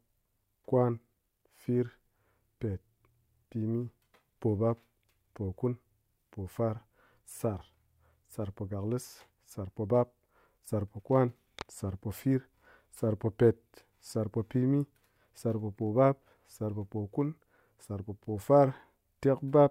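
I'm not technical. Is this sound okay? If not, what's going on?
No. From 9.92 seconds to the end, the speech has a low buzz running under it. This is a block size mismatch (truncated). The audio moves between two steps in small chunks. One step hands over longer chunks than the next one takes in, so the end of each chunk is cut off. Each cut makes a tiny click. They repeat about 47 times a second, which you hear as a buzz. The chunk size fits a 1024-sample block.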